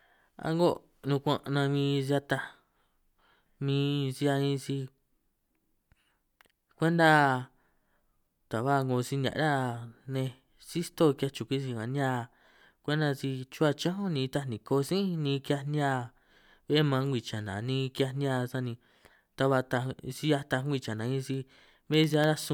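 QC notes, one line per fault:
21.34–22.44 s periodic USB or driver dropouts: a driver stall every 0.1 s blanks a tiny sliver of audio, heard as regular ticks; hairline waveform gaps and thin vertical spectrogram lines.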